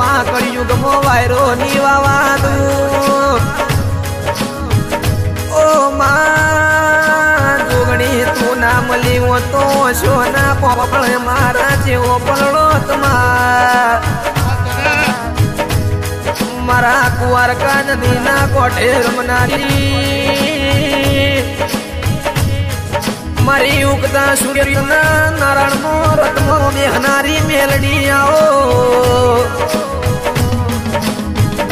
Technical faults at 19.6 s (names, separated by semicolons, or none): frames out of order